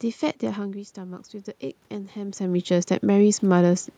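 From 1.88 s to 3.89 s the automatic gain control is rising. Around 2 s the talker moves away and the speech level at the microphone falls by about 11 dB. The AGC responds by slowly adding about 4 dB of gain over roughly two seconds. That recovers only part of the drop, so the speech stays quieter. Because the gain applies to everything, the room noise swells along with the voice, and the background creeps up.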